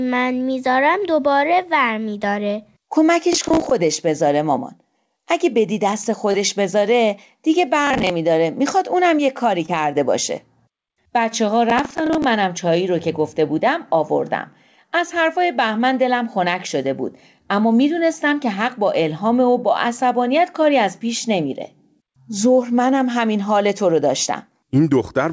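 Processor overload crackle first appears from 3.33 to 3.71 s. The processor could not finish its small audio buffers, which sound like roughly 15 ms each, before they were due. About 15 deadlines were missed in a row, and each miss replayed a scrap of old audio with hard edges. The result is a gritty, tearing crackle laid over the speech that stops once the load clears.

Short concealed packet loss follows from 6.32 to 6.36 s. About 20 ms of the call arrived too late for the decoder. The receiver bridged the hole by extending the preceding sound for roughly 18 ms, then blended back into the real signal. It is heard as a brief smear or wobble.

The processor overload crackle returns from 7.87 to 8.10 s, a shorter run of about seven missed buffers.

A second short concealed packet loss occurs from 9.66 to 9.70 s, with the same quick smear.

The processor overload crackle comes back a third time from 11.70 to 12.24 s, the longest burst, again around fifteen repeated stale buffers.

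Throughout, the G.722 call codec leaves nothing above 8 kHz.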